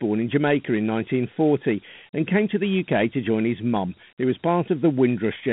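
From start to finish the speech carries a gritty hiss riding on every syllable, with nothing above 3.9 kHz and a thin band of roughly 150 Hz to 3.6 kHz. This is Dialogic VOX ADPCM: 4-bit samples track the waveform coarsely, which fits a 32 kbps stream.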